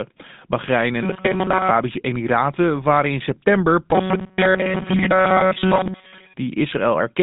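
A buzzy, gravelly roughness runs through the whole recording, and the speech sounds boxed in, with nothing above about 3.8 kHz and a line band of roughly 150 Hz to 3.7 kHz. This is the GSM full-rate codec, whose plainly audible damage fits its 13 kbps mode. It rebuilds the voice from a vocal-tract model excited by coarsely sampled pulses, which leaves that grainy, rasping texture on every syllable.

From 1.03 s to 1.71 s the voice hardens into a rigid, metallic buzz pitched at 188 Hz that still loosely tracks the speech. This is robotic sound from repeated short buffers, likely caused by audio arriving too seldom so that playback loops the last fragment instead of waiting. A 188 Hz buzz implies a repeated stretch of about 5.3 ms, and most of this span seems to be filled with those repeats rather than fresh audio.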